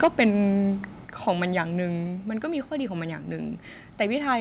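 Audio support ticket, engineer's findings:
Harsh crackle on the opening peaks, 0.03 to 0.26 s. Looks like microphone overload: input running about 7 dB past full scale, so a few percent of samples get their tops flattened at the converter. Likely mic gain set too high.

Microphone volume stepped down three times: about 2 dB at 0.05 s, about 4 dB at 1.05 s, about 2 dB at 2.07 s. Voice and background drop together, first one right inside the clipped stretch. Likely the call app's auto gain reacting to the hot input.

Call path: nothing above 4 kHz, which fits a G.711 narrowband leg.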